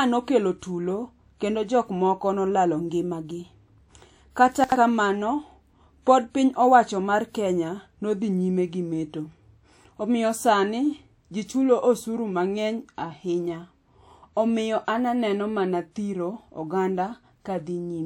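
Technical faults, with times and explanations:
4.64–4.76 s, chunks out of order: one 40 ms piece of the speech plays two chunks late, after the two pieces that should follow it, leaving a brief jumbled moment with three hard joins. Unlike a dropout or a stutter, nothing is missing or repeated, only shuffled.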